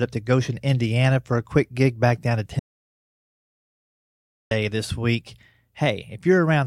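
At 2.59 s the speech stops abruptly and gives way to total silence. This audio dropout to silence lasts until 4.51 s, so about 1.92 s of material is missing. Nothing fills the gap. There is no room tone, no hiss. The cause is likely a lost input, such as a disconnected device, a failed link or a stray mute, while recording carried on. The speech then resumes mid-flow.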